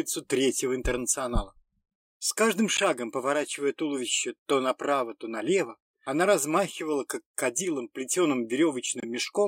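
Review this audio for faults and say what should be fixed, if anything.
Corrupt frames were decoded: flipped bits in the compressed stream reached the decoder unchecked, producing brief noisy chirps at 2.75–2.81 s and, quieter, 9.00–9.04 s. Drop or conceal frames that fail an integrity check instead of decoding them.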